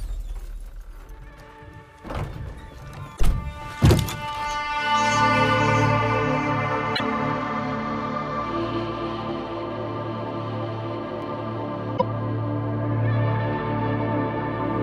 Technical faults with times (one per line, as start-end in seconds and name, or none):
3.13-3.20 damaged data in a compressed stream
6.92-7.00 damaged data in a compressed stream
11.94-12.02 damaged data in a compressed stream